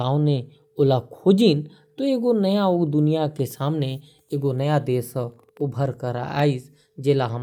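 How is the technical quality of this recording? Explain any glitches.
Nothing stood out as a technical problem on listening, and there are no glitches in the recording to explain.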